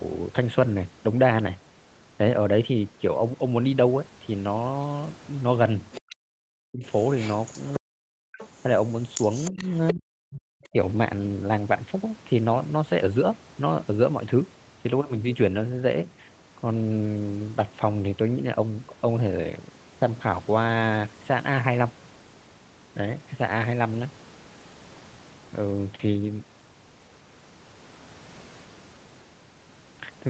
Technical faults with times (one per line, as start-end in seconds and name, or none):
5.92-6.15 other side's voice leaking through
6.21-6.83 speech suppressed in double talk
7.18-7.80 other side's voice leaking through
7.79-8.29 speech suppressed in double talk
8.34-8.48 other side's voice leaking through
9.15-10.41 other side's voice leaking through
9.51-10.76 speech suppressed in double talk